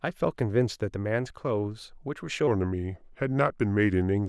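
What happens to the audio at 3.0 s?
At 3.0 s the speech sounds slower and deeper than before. From 2.47 s to the end of the clip at 4.29 s it plays at 0.859 times its recorded speed, so the pitch drops by roughly three semitones and the pace drags. This is a section at the wrong speed. It is likely that an editor or player ran that stretch against a mismatched clock, which stretches time and lowers pitch together.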